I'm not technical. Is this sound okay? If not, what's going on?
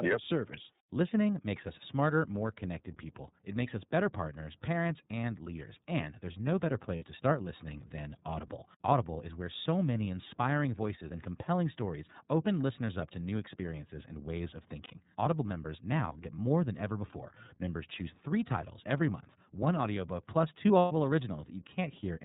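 No. Throughout the clip, the iLBC codec, a phone-call compression system, is plainly audible. It keeps only the lower part of the sound, nothing above 4 kHz, so the speech sounds narrow, like a phone line. It rebuilds the voice in short chunks, which fits 30 ms pieces, and that gives the speech a slightly rough, synthetic edge.

There are also lost iLBC frames at 6.96 s, 14.84 s and 20.79 s. The first comes between "there's no better" and "to start listening than", the second follows "experiences and ways of", and the third follows "one audiobook plus two". Bits of the audio went missing in transit, and the decoder filled each gap by repeating the last sliver of voice mixed with noise. You hear a brief held, buzzy sound, 60 ms at the first two spots and 120 ms at the last, before normal speech resumes immediately.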